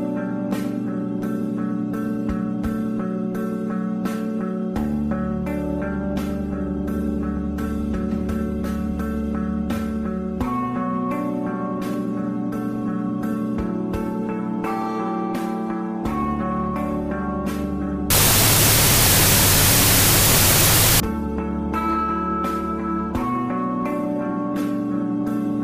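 From 18.10 to 21.0 s there's a wrong sample width fault. The bytes get read in smaller chunks than they were written in, which fits 32-bit float data being read as 16-bit integers. You get harsh, loud noise with the real sound buried underneath, playing at half speed and an octave low.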